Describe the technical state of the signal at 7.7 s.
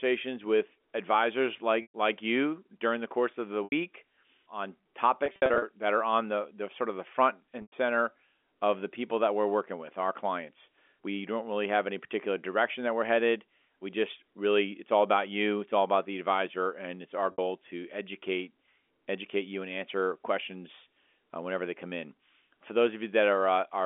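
At 7.7 s you're inside a packet loss with pitch repetition, running from 7.62 to 7.72 s. About 100 ms went missing, which fits five 20 ms packets. The receiver loops the last pitch period, so you get a brief buzzy hold that fades toward silence before the audio cross-fades back in.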